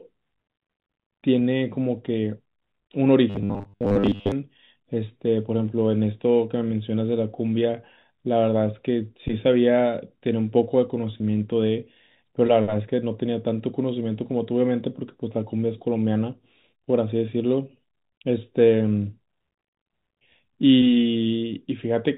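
From 3.30 to 4.32 s the speech turns into a rigid, metallic buzz fixed at 100 Hz that only loosely follows the words. This is robotic sound from repeated short buffers, likely caused by audio arriving too seldom, so roughly 70 percent of the stretch is replayed 10 ms chunks while the real signal is skipped.

Around 11.18 to 11.20 s a brief buzzy hold briefly freezes the sound. It is packet loss with pitch repetition: about 20 ms went missing, which points to a single lost packet, and the receiver bridged the gap by repeating the last pitch period. The G.711 telephone band caps everything at 4 kHz.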